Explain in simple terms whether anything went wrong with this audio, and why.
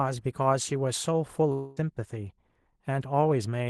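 From 1.52 to 1.78 s, the sound turns into a fading buzz, then resumes with a quarter second lost. This likely comes from a long network dropout.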